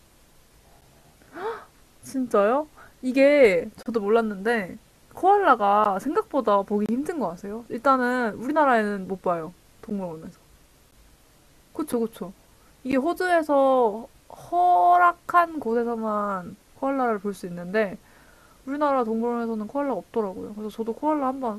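Hard-edged silent holes of 9 to 31 ms break the speech at 0.81, 3.83 to 3.86, 5.84, 6.86 to 6.89, 9.90, 10.91, 11.93 and 12.92 s. This is a gap between stream segments: timestamps of adjacent one-second segments don't meet, so silence fills the space. Each appears as a flat line on the waveform and a thin blank vertical stripe on a spectrogram.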